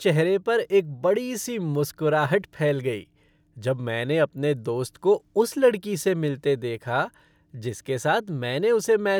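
A speech recording with no technical faults to report. Nothing in it calls for a time, a value or a cause.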